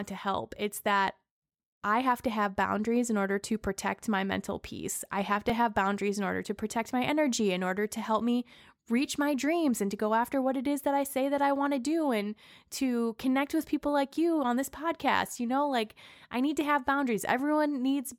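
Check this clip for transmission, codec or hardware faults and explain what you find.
One hardware fault is present: a repeated buffer at 5.50 s, between "peace I have to" and "have boundaries in order". New audio arrived late, so the device replayed its last tiny block, which fits a 64-sample buffer of about 1.3 ms, two extra times with hard joins. The result is a brief click or buzz rather than a stutter, and virtually no speech is lost.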